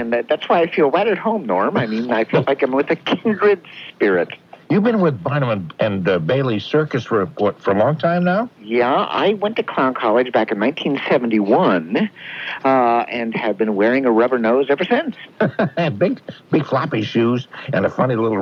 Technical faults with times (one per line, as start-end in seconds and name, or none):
none